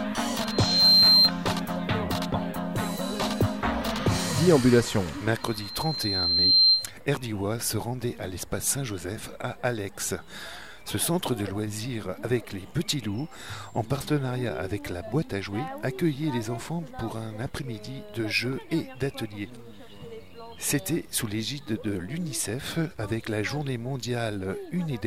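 Loudspeaker feedback squeal at 0.37–1.32 s and 5.41–6.92 s: a 4.2 kHz loop tone swells over roughly half a second, then a second, to about 10 dB above the sound, showing as a bright horizontal spectrogram line.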